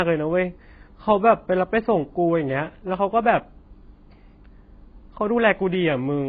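Speech, heavily damaged by AAC compression throughout. Nothing is left above 5 kHz, so it sounds dull and muffled. Sibilants smear into a fizzy, warbling texture from coarse quantisation. The likely cause is AAC-LC squeezed to a very low bitrate, around 16 kbps.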